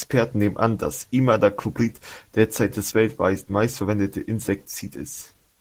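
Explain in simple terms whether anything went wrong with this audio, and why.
Opus voice compression squeezed the speech hard from start to finish, so the fine detail of the voice was coded coarsely, making it sound plainly hoarse and slightly robotic.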